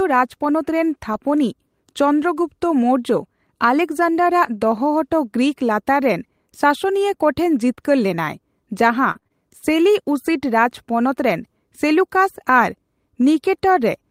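At 7.75 to 7.79 s there is a short concealed packet loss: about 20 ms of speech never arrived, and the receiver bridged the hole by extending the preceding sound for roughly 18 ms before easing back into the real signal. It is heard as a single brief smear or wobble. What separates it from the later fault is that it is one isolated patch, with no repetition and no lasting change in tone.

From 9.11 to 9.32 s the fault becomes repeated packet loss, producing a robotic sound. Four separate gaps land in about a fifth of a second, the longest lasting 38 ms, and together they leave about 100 ms missing. Because about half of that span is synthetic fill, each patch continuing the last sound before the next dropout arrives, the speech turns choppy. That stutter of consecutive repairs, rather than one blip, is what marks it apart.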